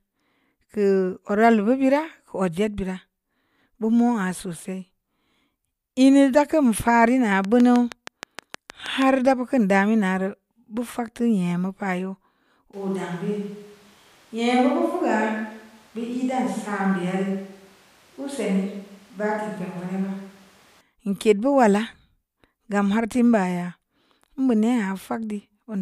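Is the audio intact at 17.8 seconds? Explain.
No. At 17.8 seconds the speech sounds roomy and hollow, thinner in the bass, and about 5 dB quieter, with room noise only about 30 dB below it. This is a switch to a distant microphone, running abruptly from 12.73 to 20.81 s. The close microphone's signal was likely lost or left out, so this stretch comes from a mic further away that picks up more of the room's reflections and ambience than the direct sound.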